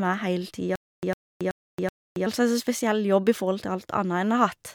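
From 0.76 to 2.27 s, stutter with silent gaps: a 103 ms speech fragment repeats four times every 378 ms, separated by 275 ms of digital silence, likely from a stalled stream.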